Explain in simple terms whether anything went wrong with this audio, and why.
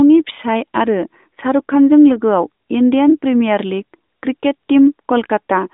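Nothing went wrong here; I hear no faults.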